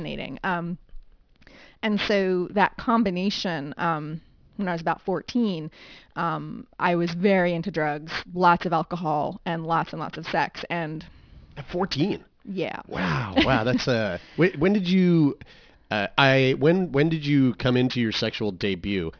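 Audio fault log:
Throughout, aliasing: sibilants come out gritty and metallic, with a harsh, unrelated haze of tones pressed up against a hard ceiling near 5.5 kHz, sitting around 20 dB under the speech. The band edge points to a downsample from 44.1 kHz to 11 kHz done without a low-pass filter first. Energy above half the new rate could not be represented, so it folded back below 5.5 kHz as false pitches that bear no harmonic relation to the speech.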